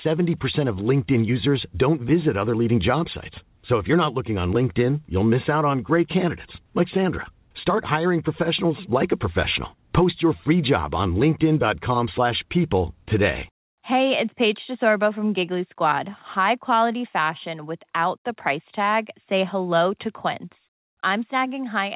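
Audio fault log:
No fault in the speech clip.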